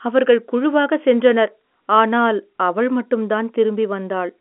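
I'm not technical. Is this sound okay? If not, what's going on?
Yes, the sound is okay: it is a recording of speech carried over an ordinary landline-style telephone connection, which is why it has that familiar narrow phone quality, and nothing in it has gone wrong.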